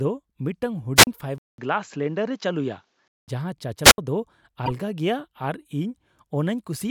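Speech with two wireless microphone squelch dropouts, at 0.96 to 1.07 s and 3.84 to 3.98 s. Each time the FM signal fades, hiss rises, and the receiver's squelch mutes the output for about 37 ms and then about 70 ms before the audio returns. From 1.38 to 3.28 s the sound goes dull, with nothing above 7.6 kHz. There is a 200 ms silence at the changeover, loudness stays roughly the same, and a new noise floor sits around 50 dB below the signal. The likely cause is the input switched to a poorer, narrower-band device. At 4.66 to 4.70 s a corrupt frame decoded produces a short burst of misplaced spectral energy peaking near -15 dBFS. Its length fits roughly three damaged codec frames played back anyway.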